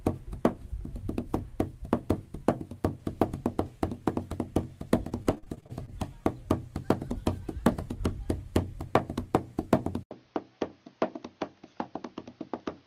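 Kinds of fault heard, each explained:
Repeated packet loss (robotic sound): the audio stream lost or delayed packets again and again, and each hole was papered over by extending the previous bit of sound. Between 5.09 and 5.89 s there are 10 gaps, the longest 39 ms, about 200 ms filled in and 220 ms missing, so about a quarter of that stretch is concealment. The sound turns choppy, with pieces dropped out.
Input switched to a poorer device: the recording's input changed partway through, likely to a lesser microphone or a headset's call mode. At 10.03 s there is an 80 ms silence. From then to the end the sound has nothing above 6.5 kHz, which makes it duller and boxier, and it drops about 5 dB in level. A new noise floor sits about 30 dB under the signal.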